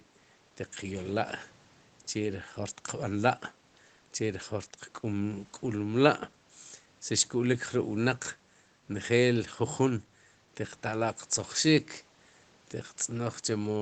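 Nothing stood out on listening to this speech recording.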